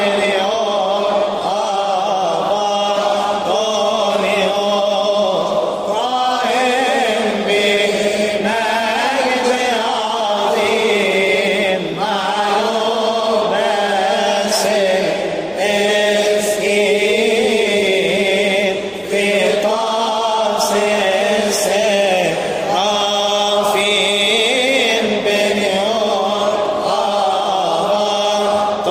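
At 7.75 to 7.77 s the audio has a short concealed packet loss. About 10 ms of data arrived too late for the decoder, and the receiver synthesised a matching 10 ms by extending the preceding sound before crossfading back, leaving a brief smear or wobble.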